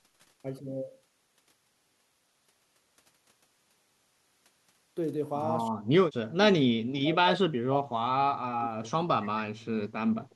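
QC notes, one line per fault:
5.67–5.99 s and 6.22–9.26 s: speech suppressed in double talk. The speech level falls sharply, by around 40 dB at its deepest, briefly and then for about three seconds. The likely cause is an echo canceller cutting both the near talker and the far-end echo during simultaneous talk.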